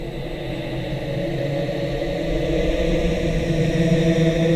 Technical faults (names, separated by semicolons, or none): none